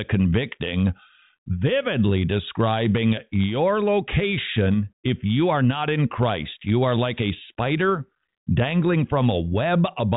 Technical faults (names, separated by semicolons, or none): none